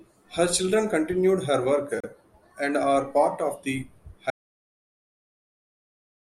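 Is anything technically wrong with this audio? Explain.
Yes, there are two faults in this speech clip.

At 2.00 to 2.04 s, between "children continued her work" and "and are part of", there is a gap at a join of encoded pieces. It is a 32 ms gap with smeared edges, so the truly silent part is shorter. Separately encoded segments were joined without trimming encoder delay and end-frame padding, and speech then resumes where it stopped.

From 4.30 s, just after "are part of the", there is an audio dropout to silence lasting to the end of the clip. The sound cuts off abruptly into silence with no room tone. This is likely lost input, with the recorder continuing to write silence.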